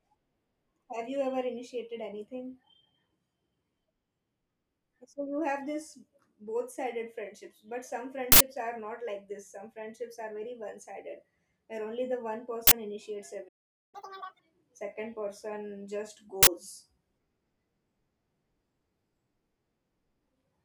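It's a speech clip, and at 13.48 s it just cuts to silence for about 0.45 s, until 13.95 s. That's a playback stall, likely the player running dry of data or its thread getting blocked, so output simply halts mid-flow. From 13.95 to 14.39 s you get catch-up at higher speed: the backlog is resampled at 2.0x, so pitch jumps roughly ten semitones and everything sounds chipmunky, then it settles back to normal right before "second person just".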